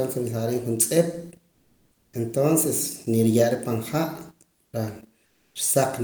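Comfort noise in place of the background appears in this speech clip from 1.51 to 2.13 s, between "riim juntz'ip" and "entonces niruye'ra pan", again at 4.61 to 4.73 s, and at 5.25 to 5.55 s. In each pause the faint room background, some 45 to 49 dB below the loudest passages, gives way to smooth, featureless hiss, about 1, 6 and 2 dB quieter respectively, most likely Opus discontinuous transmission halting and the receiver synthesising filler noise.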